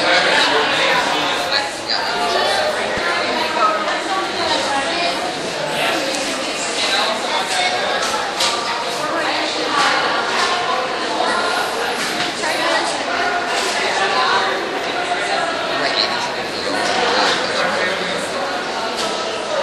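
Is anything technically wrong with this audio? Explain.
Yes. From 2.95 to 2.99 s, damaged data in the compressed stream makes the decoder lose sync and seek the next frame. It is one isolated glitch, unlike repeating underrun gaps.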